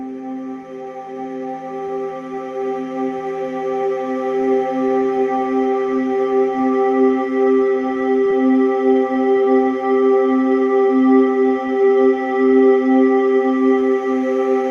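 From 0.21 s to 14.70 s the audio carries small, unevenly spaced hiccups and an unsteady tempo, and it runs at 97% of its proper speed, adding around 0.4 s in total. These are repeated timing corrections: the receiver keeps stretching short pieces so playback stays in step with the incoming stream, always in the same lengthening direction. They come from clock drift between sender and receiver, with the sender's clock running roughly 4 percent slow, so the jitter buffer keeps draining and must be topped up with repeated material. At 3.18 to 3.23 s a sound is held on for about 15 ms before the audio carries on from where it left off, with nothing lost. That is a short stall from a late packet: the buffer ran empty, the last sound was extended until the packet turned up, and the delay grew by 15 ms as a result. Scattered short gaps then appear in three stretches, each patched by continuing the preceding sound so that none of the audio goes missing. 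From 5.06 to 6.66 s there are about three, the longest near 7 ms. From 8.31 to 10.22 s there are about four, the longest near 10 ms. From 11.67 to 13.84 s there are about five, the longest near 15 ms. Each is heard as a brief tick or smear, and in every stretch the concealed parts make up only a small share of the span. Each comes from a packet lost or arriving late, one here and one there. Throughout, the top end stops around 12 kHz, which fits the Opus call codec on the WebRTC call path at a rate near 32 kbps.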